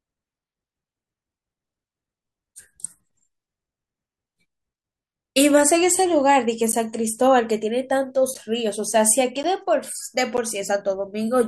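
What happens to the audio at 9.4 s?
At 9.43 s the speech drops into a block of digital silence about 10.7 ms long, which fits a 512-sample buffer replaced by zeros. The gap is short enough that it is heard as a tick or dip rather than as silence. A waveform shows a near-flat line; a spectrogram shows a thin blank column.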